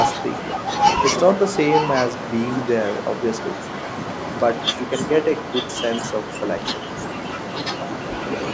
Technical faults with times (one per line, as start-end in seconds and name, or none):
0.00-1.02 echo leak
1.34-2.48 echo leak
3.00-8.48 echo leak